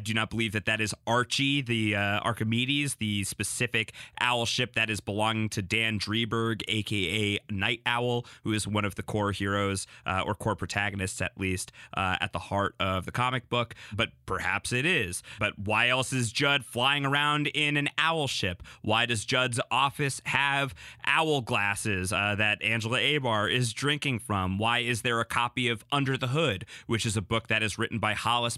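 Nothing in this speech recording stands out as a technical fault, so there's no moment to point to and nothing to trace back to a cause.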